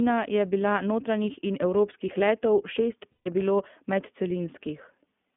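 The whole speech clip runs through the iLBC codec. The band stops near 150 Hz and 3.5 kHz, so it sounds thin and boxed in. The coding damage is plainly audible, a rough, slightly synthetic edge. This fits iLBC's 15.2 kbps mode with 20 ms frames.

From 3.12 to 3.28 s, lost iLBC frames leave a 140 ms gap. The decoder fills it by repeating the last pitch cycle with added noise. This sounds like a held, buzzy vowel. Normal speech returns almost at once afterwards.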